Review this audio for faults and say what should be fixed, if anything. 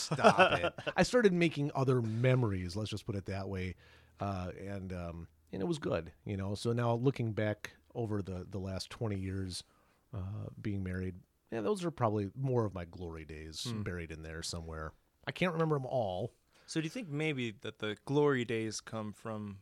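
Nothing in the speech signal calls for correction, so no fix is needed.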